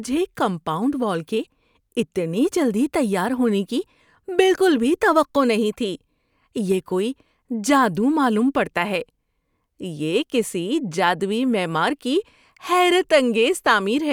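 A speech recording with no audible technical faults at any point in the signal.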